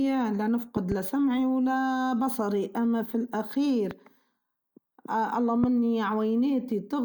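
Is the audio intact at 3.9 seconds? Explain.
No: a loud pop from 3.91 to 3.93 s, likely a voltage pulse, peaks well above the speech, yet unlike a dropout the speech continues beneath it.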